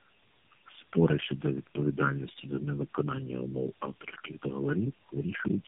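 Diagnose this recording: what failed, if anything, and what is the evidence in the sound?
The first fault is channel delay (comb filtering), introduced where a stereo or dual-channel feed was folded to mono. It is present for the whole clip. One path lags the other by a bit under a millisecond, so the summed signal cancels at evenly spaced frequencies. The first notch sits near 700 Hz, with further notches repeating up the band. The speech sounds hollow and phasey rather than simply dull. Because the notches stay fixed in frequency, this is a wiring or summing delay and not a codec effect.

The second fault is tandem speech coding, introduced in the call's network path. Nothing survives above about 3.7 kHz, which marks it as narrowband telephony. The audio is rougher, more smeared and more warbly throughout than a single coder would leave it. That points to the speech being decoded and re-encoded at successive network borders, likely four low-rate speech coders in a row, with the last one consistent with AMR-NB. 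A single codec would give the band limit with much less grit and wobble.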